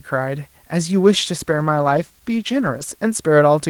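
From start to finish the speech is stored with too few bits, consistent with 9-bit samples, and dither was added before rounding. That turns the rounding error into a constant, even hiss, about 35 dB below the speech, with no distortion on top: low bit depth with dither.

From 1.4 s to 2.97 s a call bitrate drop occurs. The encoder's budget falls, which fits a change from 32 kbps to 15 kbps and holds at the lowest rate for about 1.5 s. The coarser coding makes the speech sound rough and watery, with the top end dulled.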